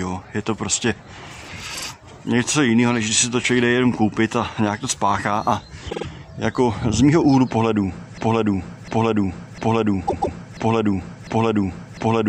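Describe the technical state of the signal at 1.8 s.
At 1.8 s there are repeated frames, from 1.74 to 1.85 s: a 48 ms block, which fits two compressed frames, plays twice more, stuttering and adding 96 ms. A spectrogram shows identical slices side by side.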